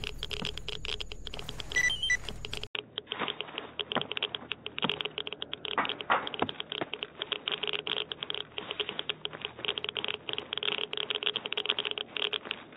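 At 2.67 s the sound drops out for 80 ms. From then to the end, nothing reaches above 3.8 kHz. It turns dull and boxy, with faint new background noise and little level change. The input was likely switched to a poorer device.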